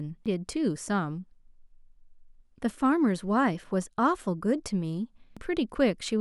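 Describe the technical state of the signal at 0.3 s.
Damaged data in a compressed stream at 0.26 s: corrupt bytes throw the decoder out of sync, producing a glitch as it searches for the next frame header.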